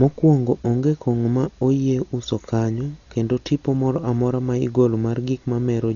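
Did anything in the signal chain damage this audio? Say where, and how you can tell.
Yes, at the codec stage: throughout, the speech is dull with nothing above 7 kHz and rough, fluttering dither noise, likely heavy Dolby Digital compression at a low bitrate near 40 kbps, not simple low-pass filtering.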